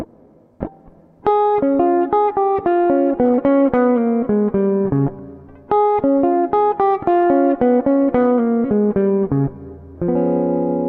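From about 5.86 s to 8.07 s there's a Bluetooth SBC bit pool drop: the link got squeezed, treble goes dull and a gritty grain creeps in, which fits the bit pool falling from around 28 to 13, roughly 102 kbps, before recovering.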